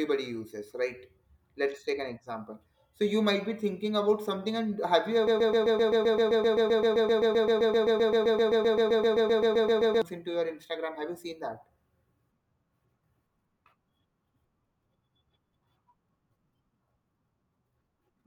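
From 5.27 to 10.02 s the speech locks into a broken-record loop: a 0.13 s fragment repeats 37 times back to back before "into your", likely because a stalled player resent its last buffer. The spectrogram shows identical slices tiling evenly, and the waveform a regular stutter.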